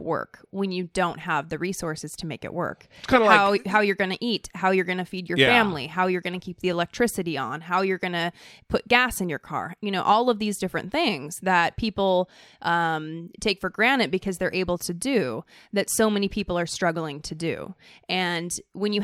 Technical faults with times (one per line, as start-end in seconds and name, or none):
none